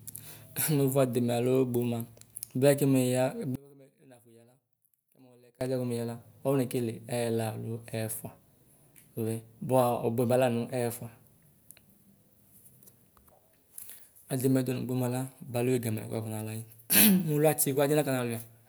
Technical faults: one channel inverted

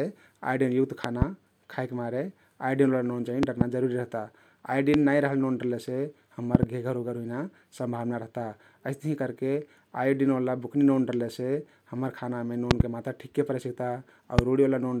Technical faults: loud pop

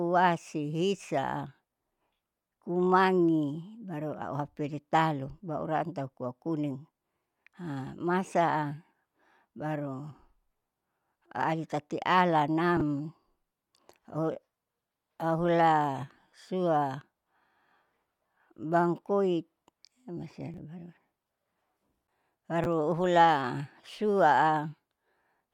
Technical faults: chunks out of order

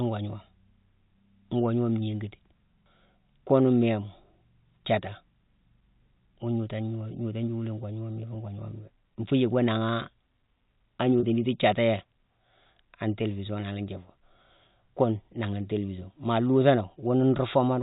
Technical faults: packet loss with pitch repetition

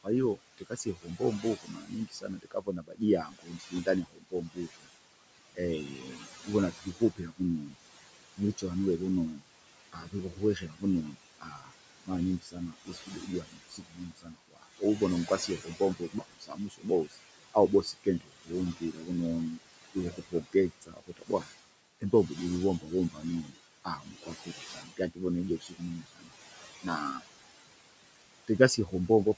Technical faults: noise suppressor artifacts; speech cut by the noise suppressor

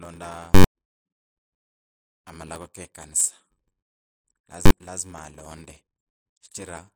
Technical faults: block size mismatch (padded); invalid numbers at full scale

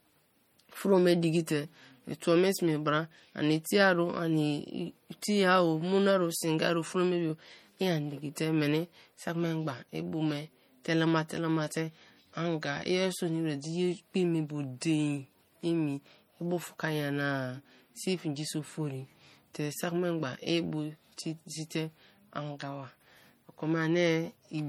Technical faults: low-bitrate audio saved at a high bitrate

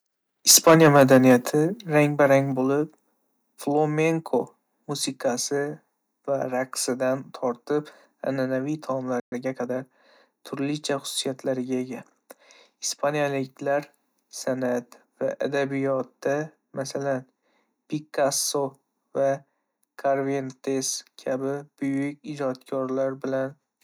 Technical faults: microphone overload; microphone volume stepped down; playback stall; time-compressed catch-up

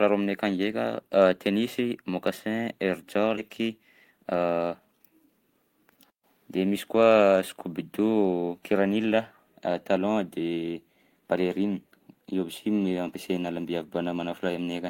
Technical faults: skip ahead; jitter buffer speed-up

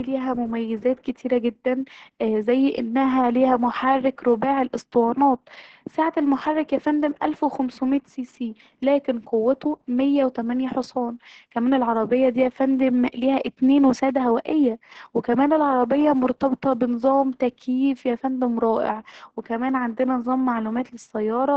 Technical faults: Opus voice compression

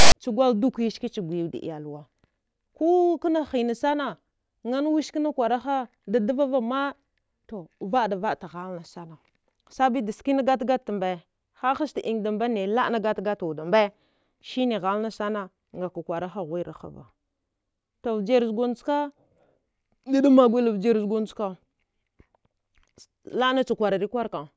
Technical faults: file tags played as audio

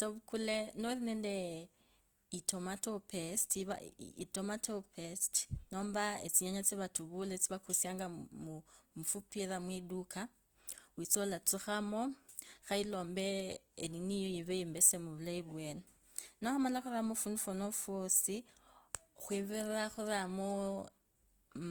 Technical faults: Opus compression

